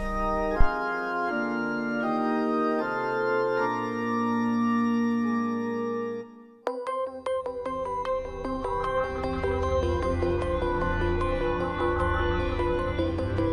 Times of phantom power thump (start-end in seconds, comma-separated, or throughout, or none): 0.61-0.69